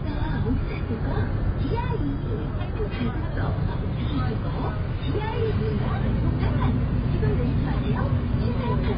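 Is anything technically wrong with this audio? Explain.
Yes. Throughout, nothing is heard above 5 kHz and layered smeared, swirling artefacts appear, likely from transcoding between lossy codecs, consistent with low-bitrate AAC re-encoded to MP3.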